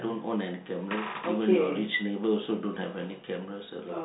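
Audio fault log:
No faults heard.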